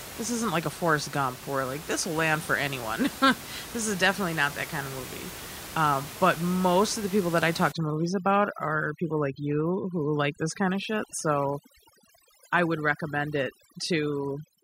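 From 7.72 s, right after "people that I talk", to the end of the clip at 14.6 s, the speech goes through overdone noise removal. The room noise, sitting about 14 dB below the speech before this point, drops and breaks up, leaving twinkling specks where individual bands flicker on and off. Unlike a noise gate, which mutes everything between phrases, this carves away separate frequency bands even while speech continues.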